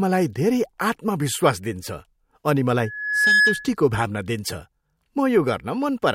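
Loudspeaker feedback squeal cuts into this speech clip from 2.79 to 3.76 s: a steady 1.7 kHz tone swells over about half a second to roughly 5 dB above the speech, as the microphone picks up its own loudspeaker and the loop's gain at that frequency exceeds one.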